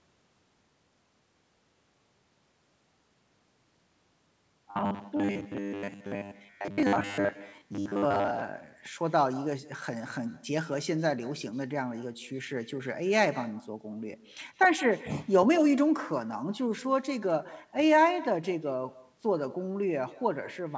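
With no echo canceller at the far end, the loudspeaker playback feeds back into that microphone, so from the start every phrase is shadowed about 0.15 s later by a thin copy about 19 dB quieter. From 4.71 to 8.44 s, new audio likely arrived too seldom and the software kept repeating 10 ms buffers in place of most of the real audio, producing robotic sound: a rigid 100 Hz metallic buzz that loosely tracks the speech.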